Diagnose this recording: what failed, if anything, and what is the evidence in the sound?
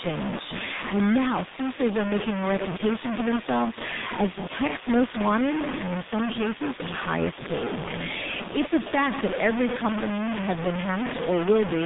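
At the sample-format conversion stage, the speech was likely truncated to very few bits without dither, which fits about 3 bits. The rounding error sits nearly as loud as the speech itself and tracks it, so every word carries a harsh, grainy distortion throughout, with quiet syllables sputtering.

At the codec stage, the speech passed through a G.723.1 codec, consistent with a roughly 6 kbit/s telephony stream. Nothing above 3.8 kHz survives, the line band sits near 150 Hz to 3.7 kHz, and heavy coding damage leaves the speech muffled and hoarse, consonants blurred throughout.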